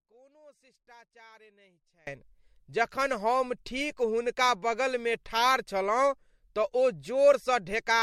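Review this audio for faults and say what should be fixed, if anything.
Audio dropout to a faint residue, from 0 to 2.07 s: the signal is already gone when the clip opens, leaving only a faint leak about 30 dB down until the speech cuts in abruptly. This is likely an interrupted feed with the downstream path still live. To prevent it, secure the source connection and monitor the input level before recording starts.

Generation loss, throughout: the audio sounds swirly, hollow and smeared, with blurred attacks and nothing above 16 kHz. It likely comes from about four successive MP3 encodes at 64 kbit/s, each requantising on a shifted frame grid. To prevent it, work from the original source and encode to a lossy format only once, at the final stage.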